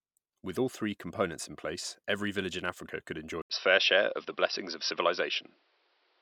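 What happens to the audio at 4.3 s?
At 4.3 s the speech sits in a stretch from 3.42 s to the end where the input has switched to a poorer device, likely another microphone or a headset's call profile. After "could enjoy" comes an 80 ms silence, then boxy sound with nothing above 5.7 kHz, a level shift of about 5 dB and new, quiet background noise. The gap, level step and changed noise floor set this apart from a plain bandwidth loss.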